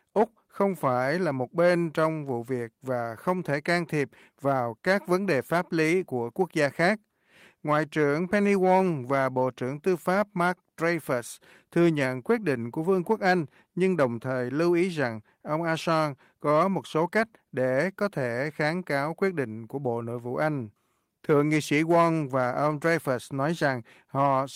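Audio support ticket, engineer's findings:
Listened to the whole speech clip and found no technical faults to report, so nothing to chase here.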